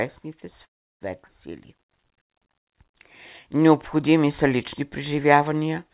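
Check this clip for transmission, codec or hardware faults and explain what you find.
Three timing faults are audible, all of the kind a call's jitter buffer produces. The audio is band-limited with nothing above 4 kHz, which fits a narrowband G.711-style call path.

A call audio freeze runs from 0.65 to 1.04 s. The sound stops and a brief fading tail gives way to about 340 ms of near silence. Packets were likely held up in transit, so the jitter buffer ran dry. The receiver stretched the last sound, then waited. When the audio resumes, it picks up where it left off. Nothing is lost. About 355 ms of delay is inserted instead.

A skip ahead occurs at 1.28 to 1.32 s. Playback jumps forward abruptly. Roughly a tenth of a second of audio is gone. Later audio was already queued, so a stretch was dropped in transit or discarded by the buffer. The two sides are joined with almost no gap. The result is an abrupt transition rather than a pause.

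A jitter buffer slow-down spans 1.78 to 2.91 s. The buffer was running low or had just raised its target delay, and built a reserve by repeating single pitch periods and small pieces of pauses. This adds 74 ms, so the passage plays at about 94% speed. Pitch stays the same. Sounds are drawn out a little.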